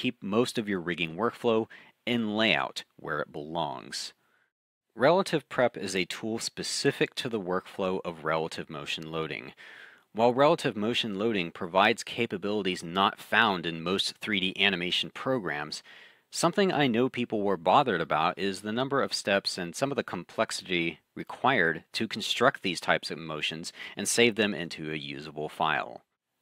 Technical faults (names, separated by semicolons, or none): none